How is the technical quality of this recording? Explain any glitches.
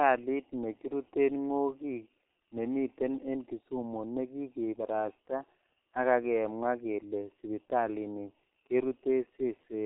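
Quality is poor because of heavy codec damage across the whole speech clip. Throughout, the G.723.1 codec, fitting roughly 6 kbit/s, removes everything above 3.8 kHz and blurs consonants into a muffled, hoarse sound. A spectrogram shows a flat ceiling at 3.8 kHz.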